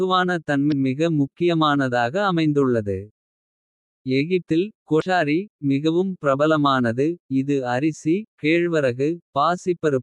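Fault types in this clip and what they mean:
Damaged data in a compressed stream: corrupted bytes in the encoded speech make the decoder misread frames and lose sync until it finds the next frame header, heard as two brief glitches of about 40 ms, from 0.69 to 0.73 s and from 4.98 to 5.02 s.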